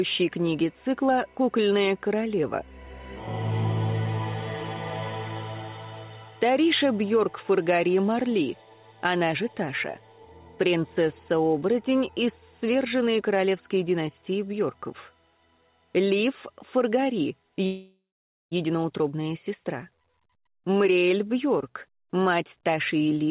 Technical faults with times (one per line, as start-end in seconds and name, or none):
17.66-18.53 long network dropout